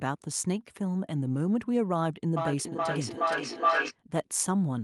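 At 2.37 s a feedback howl builds as sound loops from loudspeaker back into microphone, gaining level each pass. It settles near 1 kHz, pulsing about every 0.4 s, peaking about 2 dB above the speech, until 3.96 s. A spectrogram shows a bright horizontal band.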